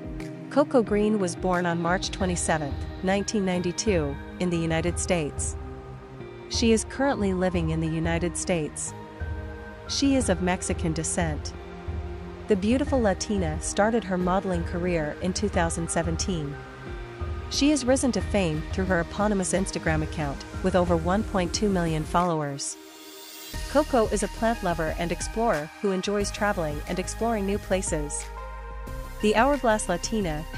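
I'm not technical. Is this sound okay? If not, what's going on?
Yes, it's fine; nothing here sounds wrong.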